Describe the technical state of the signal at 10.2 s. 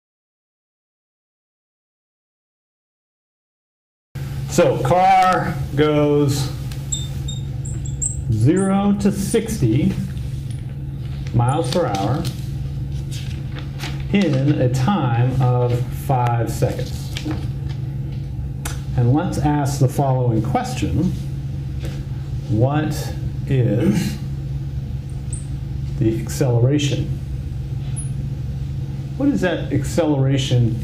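At 10.2 s the signal is inside a call bitrate drop that runs from 8.26 s to 11.67 s. The call's bandwidth estimate fell, so the encoder was told to spend far fewer bits. The sound fits a fall from about 96 kbps to about 28 kbps, held at its lowest for about 2.1 s. At that rate the coding turns coarse and the top frequencies are cut away. The sound is muffled, rough and watery until the rate climbs back.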